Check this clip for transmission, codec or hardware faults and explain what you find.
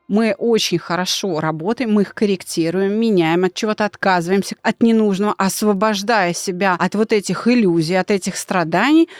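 One fault is present, a bit error spike at 5.76 s. A single sample flips one bit, so its value jumps by a power of two and snaps straight back. The result is one sharp, broadband tick, peaking at about -30 dBFS, unrelated to the speech around it.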